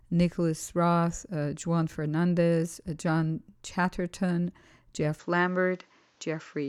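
Speech recording. From 5.19 s to the end, everything above 7.6 kHz drops away without a gap and a faint new noise floor appears, likely from the input switching to a poorer device.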